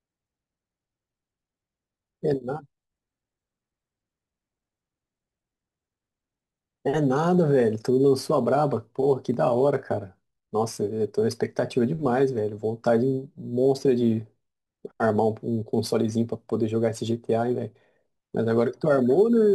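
Crude rate conversion runs through the whole clip, from start to finish. The speech appears to have been moved between sample rates by simply picking the nearest existing sample at each new instant, with no filtering, which fits a 48 kHz to 44.1 kHz conversion. Samples get skipped in a repeating pattern, leaving an error roughly 35 dB below the speech that forms tones unrelated to it, heard as a gritty, inharmonic fizz riding on louder and brighter syllables.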